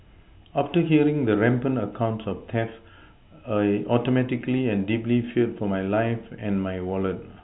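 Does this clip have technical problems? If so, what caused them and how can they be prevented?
No, nothing here needs fixing: the speech comes through the ordinary G.711 telephone coding, so it simply stops at about 3.9 kHz, just as a phone line should.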